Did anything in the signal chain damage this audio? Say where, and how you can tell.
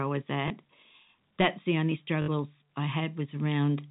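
Yes. The damage is packet loss with the last packet repeated, at the network stage. At 0.48 to 0.50 s, just after "I was", about 20 ms of audio was replaced by a copy of the previous packet. At 2.22 to 2.28 s, after "the only", a 60 ms run points to three lost 20 ms packets. The longer run gives a brief robotic stutter buzzing near 50 Hz.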